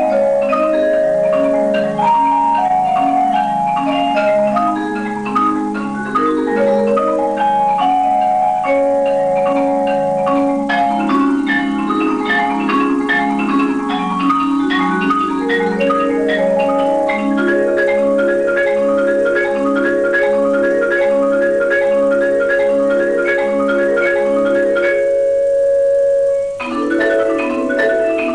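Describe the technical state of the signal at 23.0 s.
Hard clipping is present at 23.0 s, as it is across the whole clip. The signal is driven about 4 dB beyond what the chain can pass, so the highest peaks are sliced flat. Only a small fraction of samples, well under one percent, hit the ceiling. Those squared-off tops generate harmonics high in the spectrum, heard as brief crackle riding on the loudest moments rather than a continuous fuzz.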